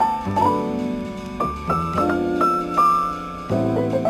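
Crude rate conversion runs throughout. Samples were repeated without filtering, which fits 44.1 kHz to 48 kHz. The error sits roughly 30 dB down, a gritty inharmonic fizz.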